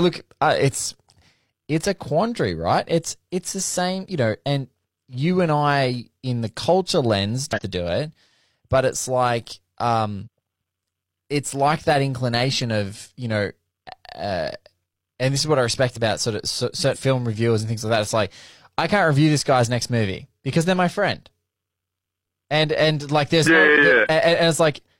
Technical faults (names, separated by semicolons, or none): damaged data in a compressed stream